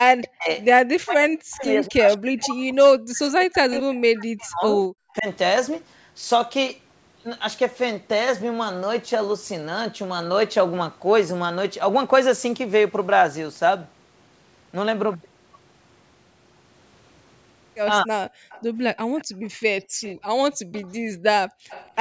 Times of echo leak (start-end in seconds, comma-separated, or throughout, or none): 2.38-2.42, 5.17-5.22, 18.49-21.90